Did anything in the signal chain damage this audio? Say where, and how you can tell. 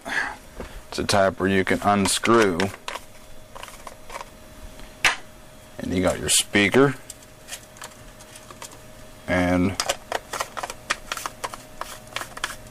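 Yes. A single loud pop sits on the audio from 10.34 to 10.36 s, peaking about 5 dB above the surrounding level while the sound continues underneath. That points to a voltage pulse likely entering the analogue path or driver, from a plug, switch, static discharge or driver glitch.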